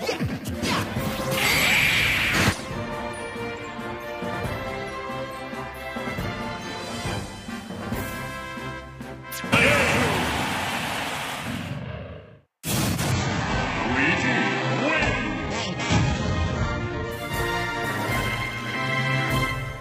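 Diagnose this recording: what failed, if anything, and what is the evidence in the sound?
Adaptive stream at a lower bitrate, from 13.1 to 17.1 s, is a network fault. The quality drops abruptly, with stronger codec artefacts. The drop fits a switch from roughly 96 kbit/s AAC-LC to an 8 kbit/s HE-AAC rendition. The connection slowed, so the player fetched a cheaper version. Because the switch happens between segments, quality changes suddenly and there is no gap.

Block size mismatch (padded), from 17.89 to 18.76 s, sits at the driver or buffer stage. A buzz at 91.9 Hz runs through the audio, and the sound plays at 0.919 times normal speed while keeping about its original pitch. One stage writes blocks shorter than the next stage reads, and the shortfall is filled with zeros. That puts a tiny silent gap in every block. The gaps repeat at the block rate to form the buzz, and they stretch the timing by the ratio of the two block sizes.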